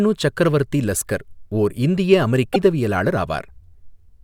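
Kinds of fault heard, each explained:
Damaged data in a compressed stream: a brief glitch breaks into the speech from 2.51 to 2.56 s, about 50 ms, where corrupted bytes in the compressed stream made the decoder misread frames, lose sync and resume at the next valid frame header.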